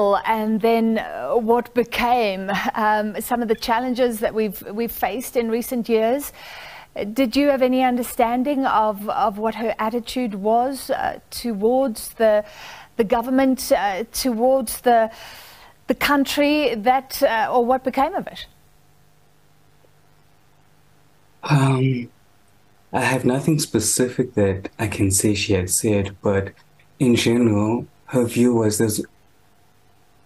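A mains buzz runs through the whole clip, from start to finish. It sits low, at about 40 dB below the main sound. The tone is raspy rather than a smooth hum. Sharp switching spikes from nearby mains equipment have leaked into the signal path. They repeat twice per cycle of the 50 Hz supply. That sends harmonics of 50 Hz well up into the kHz range, which gives the buzz its edge.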